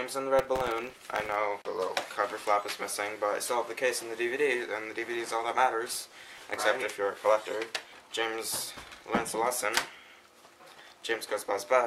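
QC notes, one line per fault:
0.39–1.36 s, processor overload crackle: a gritty tearing burst rides on the sound as dozens of very short buffers miss their deadline, each replaying stale audio with hard edges.
5.93–6.55 s, processor overload crackle: a shorter crackling burst, as a few dozen sub-millisecond buffers arrive late and repeat old audio until the load passes.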